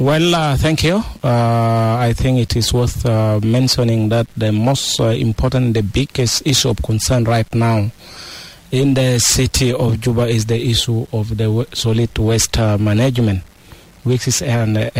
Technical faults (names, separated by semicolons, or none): low bit depth without dither